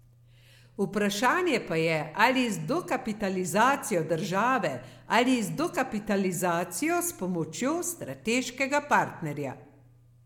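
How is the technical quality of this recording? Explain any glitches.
No glitches or technical faults are audible anywhere in the recording.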